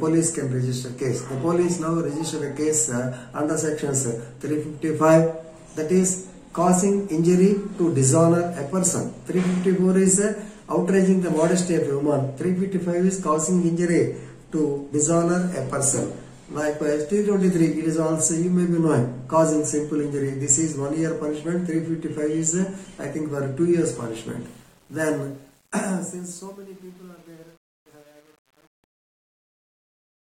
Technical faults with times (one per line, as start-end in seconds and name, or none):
24.46-30.22 truncation distortion on a fade